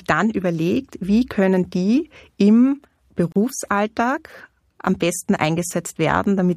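At 3.32 s, right after "wie können die im", the speech drops out for about 36 ms and then picks up exactly where it left off, which is a gap at a join of encoded pieces. It sounds like the clip was encoded in separate chunks and glued back together without trimming, so the encoder's startup delay and last-frame padding both stayed in. You get a short hole with edges smeared by the codec, ending at 3.36 s.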